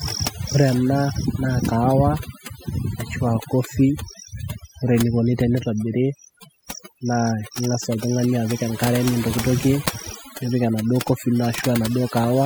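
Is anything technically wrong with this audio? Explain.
Yes. Overdone noise removal runs through the whole speech clip. A noise reduction stage set too strong cuts individual frequency bands it judges to be noise. Quiet parts of the speech vanish with them. Pauses fall to near silence with twinkling specks.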